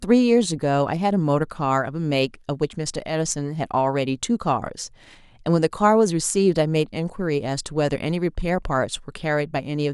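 Nothing in this recording stands out as a technical fault; the speech carries along with no dropouts, glitches or other audible trouble anywhere in it.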